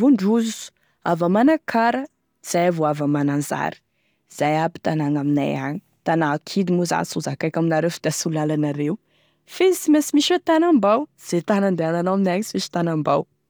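No technical faults are audible.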